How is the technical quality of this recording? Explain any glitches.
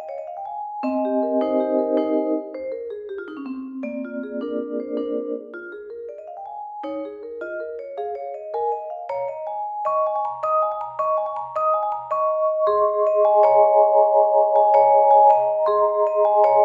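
Nothing stood out on listening; there are no glitches to explain.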